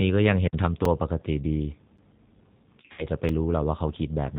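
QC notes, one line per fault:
Throughout: G.729 codec. The speech is rebuilt at 8 kbit/s from a vocal tract filter, pitch prediction and a few pulses per subframe, so it sounds plainly rough and synthetic. A spectrogram shows nothing above 4 kHz and smeared, blocky harmonics.
0.46 to 0.54 s: intermittent contact. The signal drops out for about 55 ms as a loose connection opens, with crackle at both edges and faint hiss in the gap. The waveform shows a near-flat stretch with jagged spikes at either end.
0.85 s, 1.98 s and 3.29 s: block of digital silence. Short runs of zeros, about 5 ms, 9 ms and 3 ms long, cut the audio without a fade, so each is heard as a click or tick. The lengths at 0.85 s and 3.29 s fit 256- and 128-sample buffers. Each appears as a near-flat gap with vertical broadband lines at its edges.
2.82 to 3.07 s: VoIP packet loss concealed by the speech codec. Packets totalling about 120 ms were lost, scattered over roughly 160 ms with runs up to 60 ms. 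The decoder stretched its last pitch and filter into a buzzy tone or coloured noise that fades, and the speech stays weak and distorted for a while afterwards. A spectrogram shows a frozen, repeated spectrum decaying in level.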